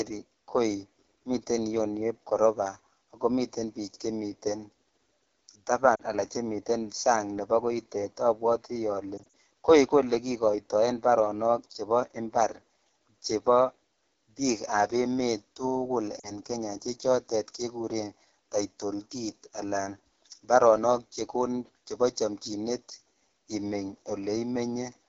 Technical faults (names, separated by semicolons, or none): AMR wideband (HD Voice) codec; lost AMR speech frames